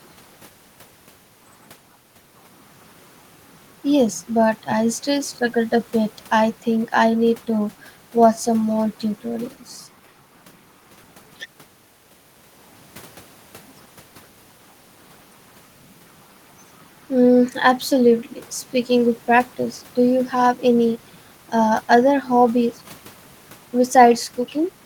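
Speech recording, no technical faults detected anywhere in the clip.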